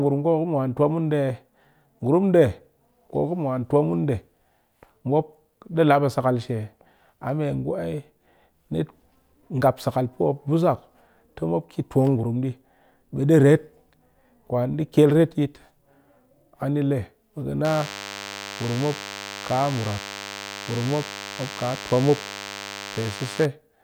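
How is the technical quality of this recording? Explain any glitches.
The recording has one clear fault near the end. From 17.64 to 23.46 s, DECT cordless phone buzz appears. A nearby handset pulses radio every 10 ms. The audio circuit rectifies it. The result is a thin 100 Hz buzz, roughly 15 dB under the speech.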